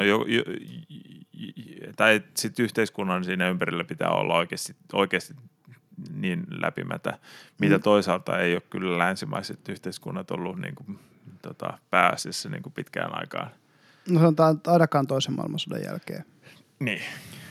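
Listening to this speech recording, nothing stood out as a technical problem at any point.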